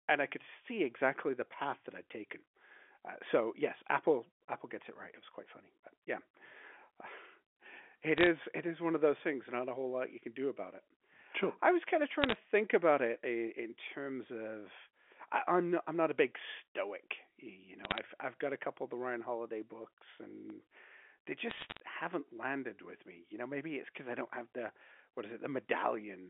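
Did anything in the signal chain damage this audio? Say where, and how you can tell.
Yes, in two places. The digital phone line itself took bit errors: bursts of sharp ticks and crackle at 8.17 to 8.27 s, 12.22 to 12.35 s (right after "I was kind of"), 17.84 to 17.98 s (just before "I've got a couple"), and 21.5 to 21.8 s. Flipped bits in the 8-bit G.711 stream each corrupt single samples, roughly a few in a thousand bits.

Separately there are two DC steps, likely from the converter, at 20.50 s and at 24.69 s, just after "I don't have the." Each is a low thump while the speech carries on. The zero line jumps, then the offset bleeds away as a high-pass around 20 Hz pulls it back to centre.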